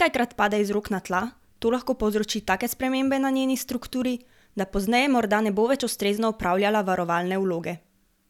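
Nothing technically wrong turns up in this speech clip, so there's no fault to point to here.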